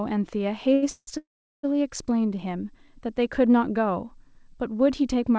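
From 0.74 to 0.84 s the speech holds one sound about 84 ms too long, with a slight buzz or dip: a short stall from a late packet, where the jitter buffer ran dry and the last sound was stretched. Between 0.90 and 1.09 s the sound turns to a fading buzz or hiss and then about 70 ms of silence, and from 1.17 to 1.65 s the same happens for longer, with roughly 390 ms of silence. These are call audio freezes, likely from packets held up in transit, adding 169 ms and then 461 ms of delay while nothing is lost. The G.722 call path passes nothing above 8 kHz.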